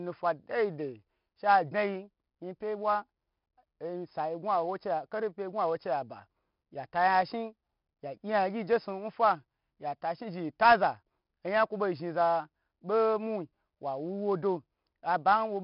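Throughout the speech, 4-bit ADPCM compression leaves a heavy, gritty hiss that tracks the level of the sound. Sharp consonant onsets distort where the adaptive step cannot grow fast enough. Nothing remains above 5.3 kHz, which fits a rate near 44 kbps.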